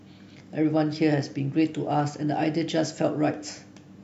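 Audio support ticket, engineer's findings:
No technical fault found in the speech signal on review; level, continuity and timing hold steady throughout, with nothing attributable to capture, processing or transport.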